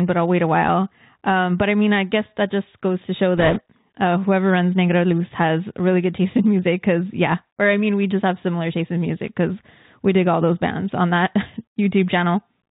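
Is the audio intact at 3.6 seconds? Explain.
No. At 3.6 seconds the audio sits at the very end of a burst of bit errors on a Bluetooth voice link, running from about 3.38 to 3.60 s, between "just goes to show" and "uh whoever runs". Bits in the headset stream were flipped at a rate of a few percent. Because no bit in this delta-modulated stream outweighs the others and the decoder's errors decay quickly, there are no sharp clicks. Instead the sound picks up a rushing, crackly noise for that quarter second.

Underneath, the whole clip carries the Bluetooth CVSD headset codec, with plainly audible damage. One bit per sample signals only up or down, with an adapting step size, which fits a 64 kbit/s stream. Nothing above 4 kHz survives, so the sound is dull and narrowband. Loud high-frequency sounds outrun the step and distort, s sounds come through scratchy, and a granular hiss lies beneath the speech.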